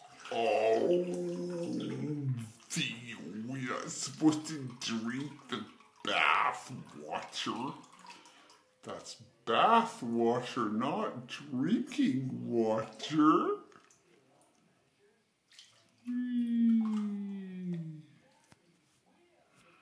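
From start to finish the audio has a wrong sample rate fault: it plays back at about 0.69 times its proper speed, with pitch lowered by roughly 6.45 semitones. Speed and pitch fall together, which fits 32 kHz material played at 22 kHz without conversion.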